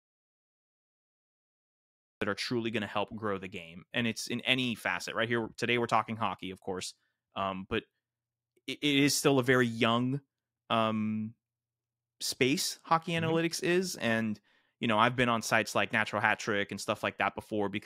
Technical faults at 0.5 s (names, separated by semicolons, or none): audio dropout to silence